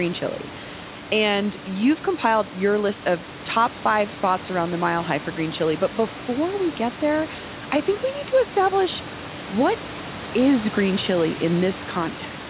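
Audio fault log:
No faults are present: the speech sits within the narrow telephone band typical of a call path, with nothing above 4 kHz, the lowest bass is trimmed by the microphone processing's high-pass filter, and room noise stays about 15 dB below the speech.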